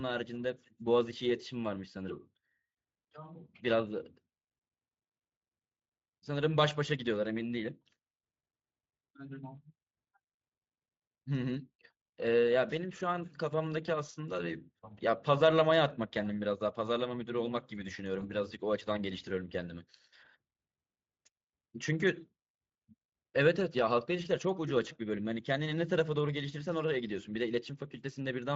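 Speech over a Speex link, its light coding roughness audible throughout: at 18.19 to 18.25 s a VoIP packet was lost, and the speech codec's packet loss concealment extrapolated the preceding sound across the gap, consistent with one missing 20 ms frame, giving a brief, fading, weakened smear before the voice recovers.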